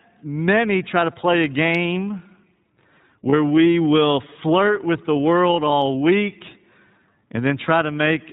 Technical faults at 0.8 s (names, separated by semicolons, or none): iLBC codec